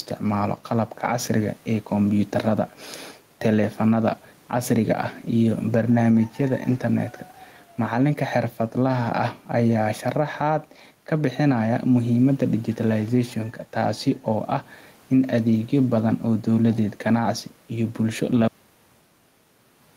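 Gain pumping runs through the whole clip. Loud and soft parts end up closer in level and the sound is squashed, with the gain swinging by roughly 10 dB. Likely the gain is too high, so a fast limiter clamps each peak. At 18.48 s, just after "iyo bulsho", the clip has a cut-off end. Speech stops mid-sound and drops straight to digital silence, with no decay. The final buffers were never written.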